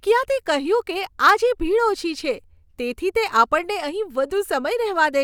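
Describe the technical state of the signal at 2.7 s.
At 2.7 s the speech signal is intact, with no dropout, distortion or other technical fault audible at that moment.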